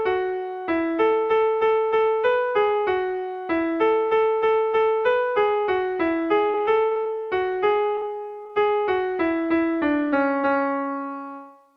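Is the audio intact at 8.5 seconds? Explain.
No, not quite. There's short concealed packet loss right there, two back-to-back gaps at 8.43–8.47 s and 8.47–8.51 s. Each is about 20 ms of lost data that the receiver papered over by extending the preceding sound, so you get a brief smeary wobble instead of a clean transition.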